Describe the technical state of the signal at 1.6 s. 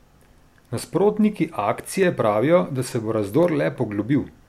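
At 1.6 s the speech falls within a run of clock drift buffer slips lasting from 0.63 to 4.13 s. Regular clicks recur every 0.70 s. The likely cause is two independently clocked devices a few hundred ppm apart, forcing the buffer to drop or repeat a handful of samples at each slip.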